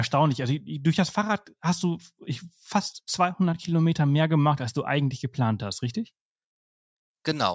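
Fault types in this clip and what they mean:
No technical fault can be heard anywhere in this speech recording; the signal stays continuous throughout.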